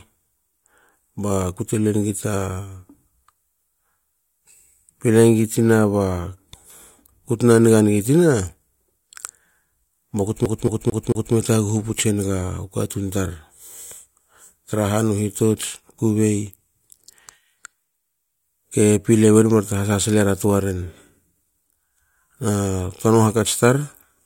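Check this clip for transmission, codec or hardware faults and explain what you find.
One hardware fault turns up, a CD stuck on one turn. From 10.45 to 11.35 s the speech stutters: the same 0.22 s snippet plays four times, each pass clipped by a brief mute. A scratch keeps throwing the laser back one track on every rotation, producing that fast, even skip.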